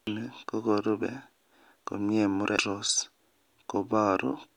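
At 0.07 s and again at 2.58 s the speech is broken by a brief glitch, the mark of damaged data in a compressed stream: corrupted bytes make the decoder misread those frames and lose sync until it finds the next valid frame header.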